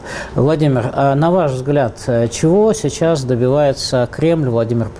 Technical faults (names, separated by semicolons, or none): none